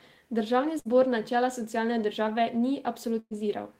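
Bursts of packet loss at 0.79–0.88 s, before "načela socialne države", and 3.19–3.34 s: lost audio is replaced by a fading continuation of the preceding sound, the second ending in brief silence.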